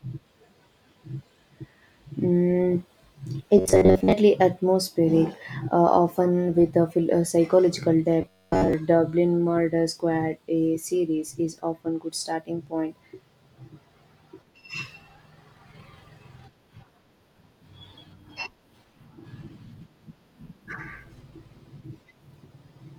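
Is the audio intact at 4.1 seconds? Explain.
No. From 3.58 to 4.12 s the speech collapses into robotic sound from repeated short buffers: a rigid, metallic buzz near 94 Hz. This is likely caused by a roughly 11 ms slice being looped over most of that span while the real audio is skipped.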